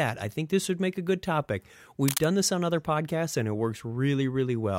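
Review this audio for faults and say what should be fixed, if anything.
A burst of cable scratch noise runs from 2.08 to 2.24 s, a dense, uneven rustle sitting only slightly below the speech level for about 160 ms. The texture points to a likely worn cable or connector being moved, its contact resistance jumping rapidly and injecting irregular noise into the signal path. That section should be repaired or retaken. To prevent it, replace or reseat suspect cables and connectors and keep them secured so they cannot shift during recording.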